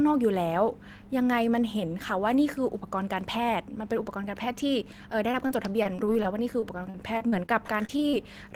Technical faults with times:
5.31-8.15 repeated packet loss (robotic sound)

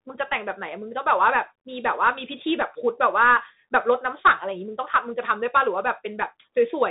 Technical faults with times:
0.00-6.91 Bluetooth CVSD headset codec

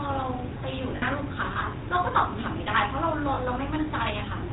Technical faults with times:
0.00-4.53 GSM full-rate codec
0.96-1.03 lost GSM frames
3.34-3.39 lost GSM frames

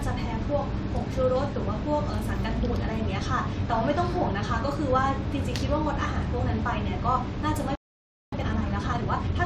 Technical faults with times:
7.75-8.33 playback stall
8.33-9.45 time-compressed catch-up

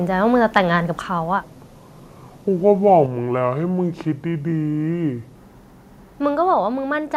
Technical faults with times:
0.56 microphone overload
1.43-5.35 section at the wrong speed
3.06 microphone volume stepped down
6.54 microphone volume stepped down

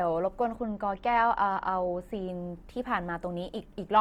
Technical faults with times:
0.00-4.01 Opus compression
0.56-2.29 channel delay (comb filtering)

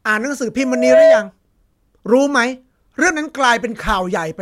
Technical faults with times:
0.58-1.31 loudspeaker feedback squeal

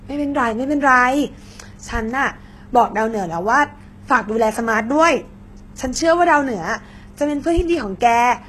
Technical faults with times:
0.00-8.48 HE-AAC compression

